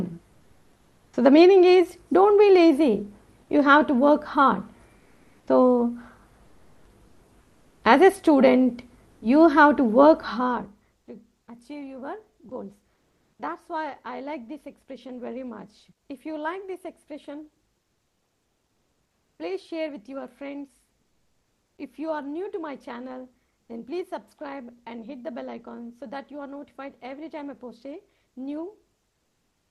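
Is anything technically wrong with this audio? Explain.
Yes, there are two related faults. The audio passes through a call codec whose high end stops near 12 kHz.

Comfort noise replaces the background at 0.33–1.13 s, 4.99–5.47 s, 7.41–7.81 s, 12.93–13.39 s and 23.61–23.69 s. This is likely discontinuous transmission: the sender stops sending in pauses and the receiver synthesizes smooth noise instead. The real background, about 40–56 dB below the loudest sound, turns featureless and shifts in level, by about 1–4 dB quieter and about 4 dB louder at 12.93 s. On a spectrogram, textured background becomes uniform haze with abrupt edges.

Sound is dropped by the voice detector at 12.49 s, where about 20 ms of sound is likely treated as background and replaced with comfort noise. The result is a tiny clipped-off gap. The spectrogram shows a thin vertical smear of flat noise.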